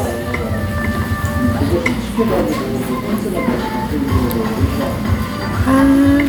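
Nothing stood out on listening to this recording of sounds.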